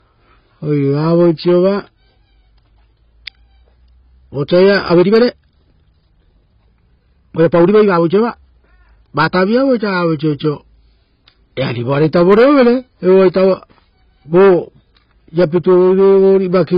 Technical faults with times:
0.00-16.78 AAC compression
4.83-9.31 time-stretched section

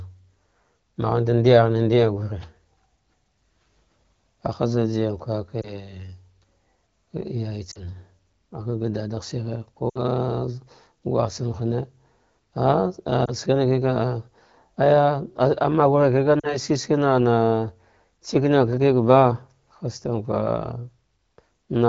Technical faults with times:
5.62-5.70 lost AMR speech frames
7.71-7.77 lost AMR speech frames
9.89-9.99 lost AMR speech frames
13.25-13.31 lost AMR speech frames
16.40-16.57 lost AMR speech frames

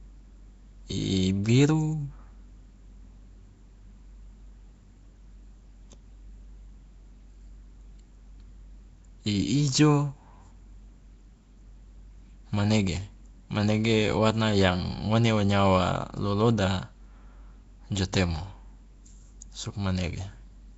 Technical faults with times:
0.00-20.77 Nellymoser compression

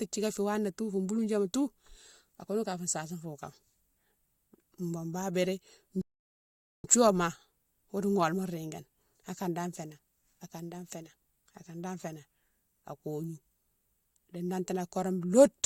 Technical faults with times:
6.01-6.84 rebuffering stall

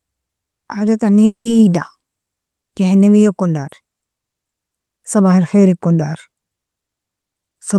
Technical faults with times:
1.25-1.47 long network dropout

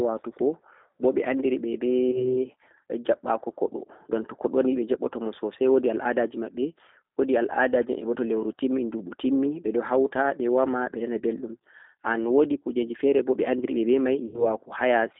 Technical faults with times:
0.00-15.19 G.729 codec
2.11-2.37 VoIP packet loss concealed by the speech codec
9.61-9.65 VoIP packet loss concealed by the speech codec
14.26-14.45 VoIP packet loss concealed by the speech codec

